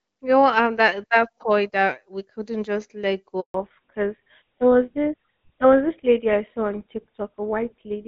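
Handover gap, 3.40 to 3.54 s, just after "we couldn't just let": the call switched networks and no speech frames arrived during the change, so the sound fades within a few tens of milliseconds and stays silent for 140 ms until the new link carries audio again.

Fallback to narrowband, from 3.54 s to the end: the call left the HD Voice path, where the AMR wideband (HD Voice) codec's light coding damage fits about 12.65 kbit/s, and moved to an older codec that fits GSM full rate. Everything above 4 kHz is gone, so the speech turns duller and rougher.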